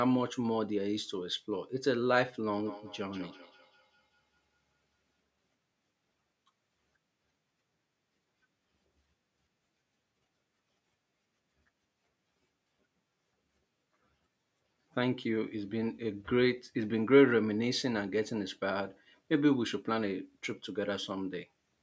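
From 2.53 to 5.2 s there is a feedback echo between two devices: a second device in the room is playing the call back, and this microphone picks that playback up again, which its own echo canceller cannot remove. The speech therefore returns about a fifth of a second late, peaking about 21 dB below the direct voice, with a thinner, ringing quality than the original, while the band stays limited to 8 kHz by the call's microphone processing.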